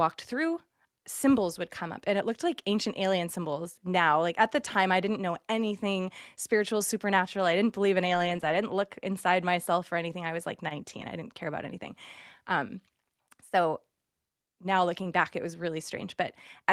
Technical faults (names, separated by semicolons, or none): lost packet rebuilt from error correction